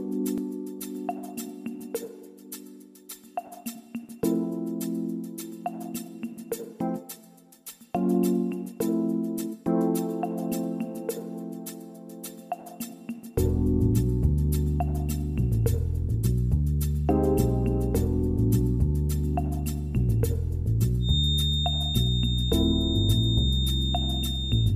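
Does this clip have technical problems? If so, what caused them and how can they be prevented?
Yes. From 20.99 s to the end at 24.76 s, a feedback whistle appears. It is a thin, steady tone at 3.6 kHz, sitting a few decibels below the main sound and swelling and fading slowly in level. The likely cause is a loudspeaker-to-microphone loop held just at the edge of feedback. One frequency keeps ringing without building up. To prevent it, lower the monitor gain, increase the distance between speaker and microphone, or notch out 3.6 kHz.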